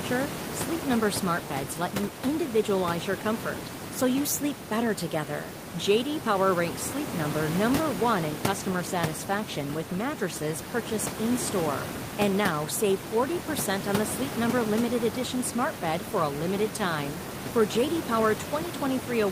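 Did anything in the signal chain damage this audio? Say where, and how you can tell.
No, nothing in the chain has damaged this speech; the only non-speech content is the room's own background noise, sitting about 9 dB below the voice, which the microphone picked up and which isn't a system fault.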